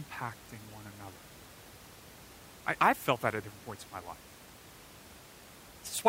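Nothing goes wrong here from a technical standpoint; the only thing underneath the speech is a bit of ordinary room noise sitting about 20 dB below it, which is just part of the space the microphone was in.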